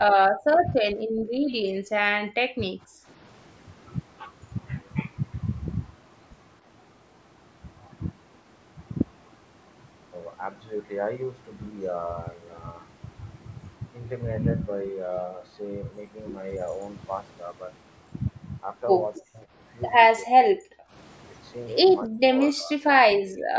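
From 0.0 to 3.08 s the speech dips hard, by roughly 35 dB, for about two seconds in pieces. This is speech suppressed in double talk. Both sides likely spoke at once, and the echo canceller turned the near talker down with the echo.

At 19.19 to 19.23 s a faint echo leak slips through. It is a quiet copy delayed by 276 ms, far below the speech. The far end's echo canceller likely missed part of its loudspeaker pickup.

More double-talk suppression likely follows. Speech drops at 19.2 to 19.5 s, 20.25 to 20.94 s and 22.08 to 23.55 s, by roughly 30 to 40 dB.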